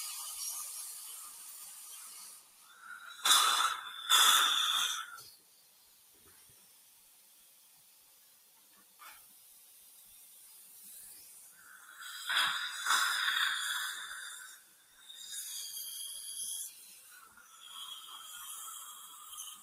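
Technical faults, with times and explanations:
Throughout: noise suppressor applied to music or sounds. A suppression stage built for speech is treating steady parts of these sounds as noise, so gain swings by about 15 dB between moments it passes and moments it holds down. Held material and tails pump and thin while sharp onsets survive.
1.19–2.73 s, 5.36–9.01 s, 9.35–9.9 s, 14.58–15.07 s: sound cut by the noise suppressor. In these spans the suppressor classed the sustained or decaying sound as noise and pulled it down by about 7 dB at most (about 4 dB in the 9.35 s span). Levels sag and decays end early.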